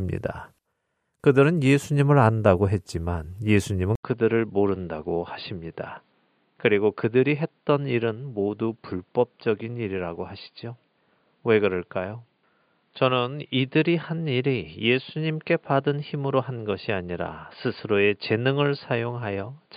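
At 3.95 s, after an 80 ms gap, the speech turns boxy, quieter and carries faint new background noise to the end, with nothing above 4.8 kHz, likely from the input having switched to a poorer device.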